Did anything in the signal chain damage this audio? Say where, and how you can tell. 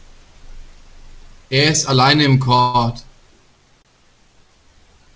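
Yes. A short stall from a late packet appears at 2.56 to 2.60 s and again at 3.82 to 3.87 s, a network and jitter-buffer fault. The last sound is held for about 24 ms and then 28 ms with a faint buzz or dip. Nothing is skipped afterwards, which separates this from a dropout.

A call audio freeze follows directly, from 2.60 to 2.76 s. The sound turns into a fading buzz or hiss for about 137 ms without reaching silence, then resumes where it stopped. The likely cause is packets held up in transit that emptied the jitter buffer. Its length and decay distinguish it from the brief stalls. The G.722 band limit at 8 kHz stays steady throughout.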